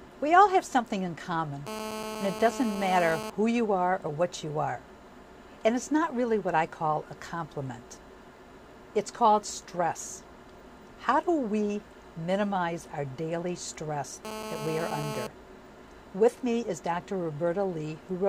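GSM phone buzz appears from 1.67 to 3.3 s and again from 14.25 to 15.27 s. A 2G handset close to the recording chain is pulsing its transmitter about 217 times a second, and the audio circuitry rectifies those radio bursts into the signal path. The result is a hard, raspy 217 Hz buzz full of harmonics, sitting about 8 dB below the program and unrelated to it. It holds steady through each stretch, as a phone in a call does.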